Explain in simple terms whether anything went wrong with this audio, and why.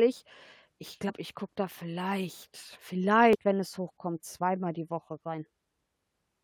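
Damaged data in a compressed stream broke the decoder's tracking twice, causing brief glitches at 1.08–1.10 s before "ich gucke da vielleicht" and 3.33–3.35 s before "wenn es hochkommt zweimal".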